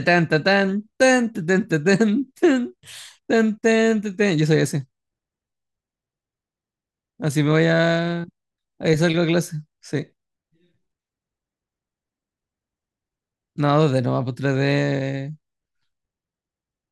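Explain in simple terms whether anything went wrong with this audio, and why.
Nothing went wrong here.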